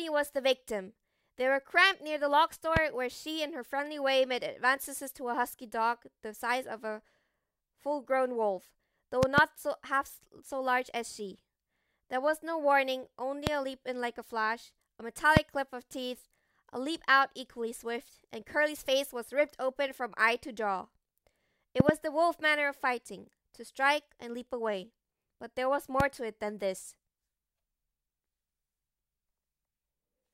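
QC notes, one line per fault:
2.77–2.79, 9.23–9.40, 13.47–13.49, 15.37–15.39, 21.80–21.91 and 26.00–26.03 s: loud pop. Each is a sharp pop laid over the speech. The speech carries on underneath without a break. At 9.23 and 21.80 s there are two pops in quick succession. Peaks sit about 15 to 25 dB above the speech, the softest at 26.00 s. A sudden voltage step, likely from a plug, switch or static, gets shaped by later circuits into a brief pulse.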